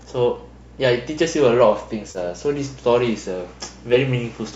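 At 2.11 to 2.18 s the speech has a brief smeared, noisy and phasey patch: AAC frame loss with concealment. About 40 ms of coded audio went missing, which fits roughly four lost low-delay frames, and the decoder bridged the gap by reusing the last good spectrum with altered phase rather than letting it drop out. On a spectrogram the harmonics blur into a short stretch of diffuse, flattened energy. The waveform keeps its level but loses its periodic shape there. The light roughness of the coding itself is likely from low-delay AAC compression.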